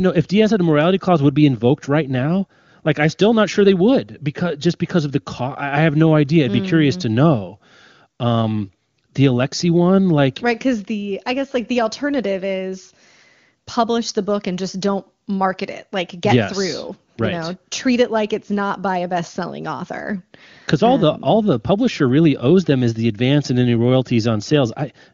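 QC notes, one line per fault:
Nothing to flag here, just speech carried over an AMR wideband (HD Voice) link that sounds like it's running at one of the codec's upper rates, with any coding traces faint at most.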